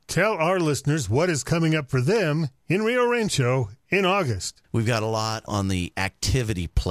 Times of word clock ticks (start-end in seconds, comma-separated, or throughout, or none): 1.09-6.40